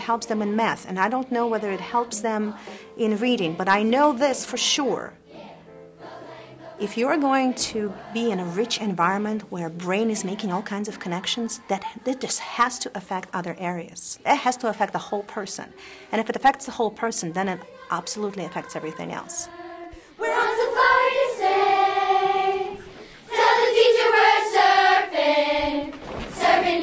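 No technical faults can be heard anywhere in the clip.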